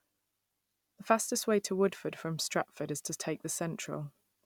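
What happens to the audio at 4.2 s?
At 4.2 s the audio carries on intact, with no dropout, click, distortion or other fault at that point.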